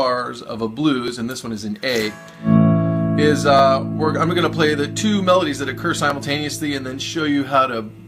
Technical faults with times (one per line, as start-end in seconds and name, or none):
1.08 overlapping chunks
3.59 overlapping chunks
6.10 overlapping chunks